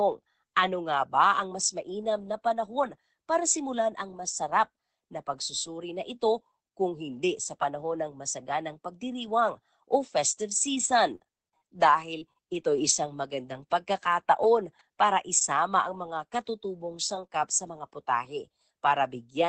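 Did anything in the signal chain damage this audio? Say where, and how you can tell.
Yes. Between 10.61 and 12.91 s there are scattered short gaps: network packets lost or late, roughly seven holes adding up to about 150 ms, none longer than about 40 ms, so about 7% of that stretch is concealed. Each hole sounds like a brief tick, smear or hiccup where the receiver extended the previous sound. The timing also stretches by a few milliseconds. Many small breaks spread over two seconds distinguish this from a single dropout.

Around 17.2 to 17.8 s, four packets were lost but rebuilt from error correction, at 17.15, 17.43, 17.67 and 17.79 s, each 20 ms. Opus carried a low-bitrate copy of each lost frame in the next packet, so nothing goes silent. Instead, each moment briefly sounds coarser and noisier than the 20 kbps Opus around it. That roughness with no smear or hole is what separates these events from concealment.

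In the same burst, 17.27 to 17.31 s has a short concealed packet loss. About 20 ms never arrived and had no backup copy, so the decoder synthesised a continuation from the preceding sound and blended it back into the real audio. The result is a short wobble or smear, and a quick consonant could disappear there. That invented continuation, rather than a degraded copy of the real audio, is what distinguishes it from the error-correction rebuilds beside it.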